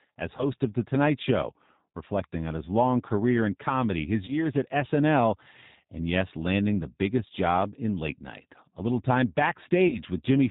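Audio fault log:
throughout G.729 codec: 8 kbit/s pulse-based coding leaves the speech plainly rough and synthetic; the spectrogram goes empty above 4 kHz, with smeared harmonics below.
0.37–0.45 s, 4.26–4.33 s (after "career in comedy his"), 9.88–10.00 s: VoIP packet loss concealed by the speech codec. The decoder stretches the last pitch and filter into a fading buzz or coloured noise, visible as decaying waveform amplitude. The first two gaps fit one lost 20 ms packet each, the last about 40 ms.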